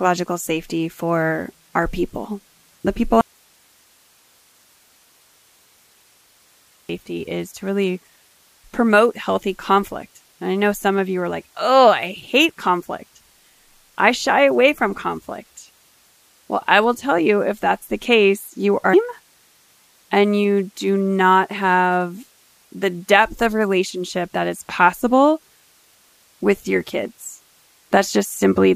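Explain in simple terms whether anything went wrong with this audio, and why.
From 3.21 to 6.89 s the speech cuts out abruptly, leaving faint hiss. This is an audio dropout to a faint residue, likely from a signal loss.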